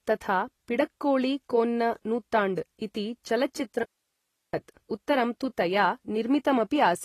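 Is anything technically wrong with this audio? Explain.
Yes, there are two faults. Throughout the speech, likely low-bitrate AAC-LC compression (consistent with roughly 32 kbps) has quantised the spectrum coarsely and cut everything above 14.1 kHz. The AAC compression damage is plainly audible, leaving the speech dull and smeared for the whole clip.

From 3.83 to 4.54 s, there is an audio dropout to a faint residue, likely where the signal was lost while the path after the break stayed live. The speech cuts out abruptly for about 0.7 s, leaving only hiss roughly 55 dB below it.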